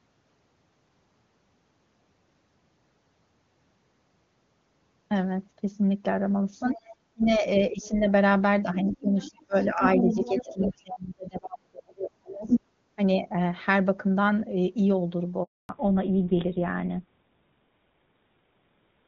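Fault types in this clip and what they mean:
Other side's voice leaking through: A second voice is heard under the talker at 6.71–6.96, 7.84, 8.89–8.95, 9.2–10.7 and 12.46–12.6 s, likely loudspeaker echo the canceller missed. It ranges from about 30 dB below the speech to level with it, showing as extra harmonic striations on the spectrogram.
Speech suppressed in double talk: While both sides overlap, the talker is pushed down at 7.13–8.07, 8.63–12.56 and 13.15–13.33 s, likely by the echo canceller ducking everything. Dips reach about 20, 35 and 5 dB, visible as hollowed, chopped stretches in the waveform envelope.
Handover gap: Speech fades out at 15.43 s and the line stays silent for 260 ms until 15.69 s, as frames stop arriving while the call switches networks. On the waveform it is a flat empty span. On the spectrogram it is a blank vertical band.
Fallback to narrowband: From 15.69 s to the end, nothing remains above 4 kHz, so the voice turns dull and rougher. 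This fits a drop from AMR-WB at 23.85 kbit/s to GSM full rate. On the spectrogram the upper energy is cut off sharply at that boundary.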